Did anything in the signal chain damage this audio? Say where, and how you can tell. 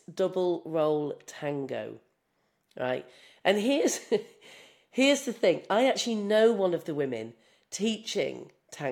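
No. Nothing in the chain audibly damaged this speech.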